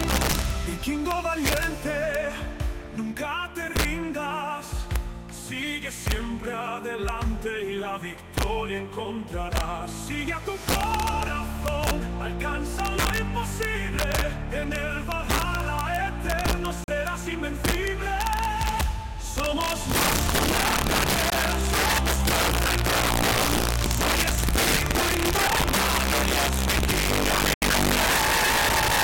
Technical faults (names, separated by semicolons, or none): integer overflow; block of digital silence